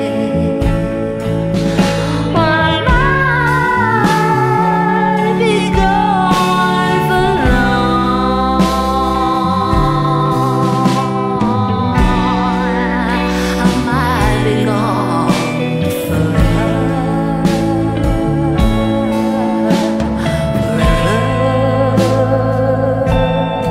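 No technical faults are audible.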